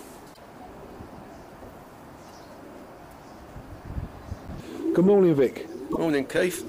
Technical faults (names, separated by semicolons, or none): damaged data in a compressed stream